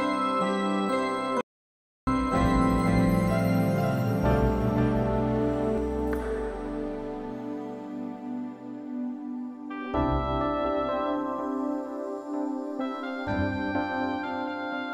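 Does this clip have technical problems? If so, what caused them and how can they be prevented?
Yes. From 1.41 to 2.07 s the sound cuts to silence with no room tone for about 0.66 s, an audio dropout to silence, likely from a lost input link or stray mute. Secure cables and connections, and monitor input levels while recording.

From 2.32 to 5.78 s a doubled audio track appears: a dry copy about 5 dB quieter trails about half a second behind and starts and stops abruptly, likely from a second capture path. Route the source through only one path, and check the mix for duplicate tracks.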